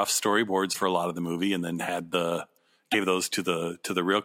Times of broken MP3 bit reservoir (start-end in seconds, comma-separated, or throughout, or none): 0.72-0.76, 2.91-2.94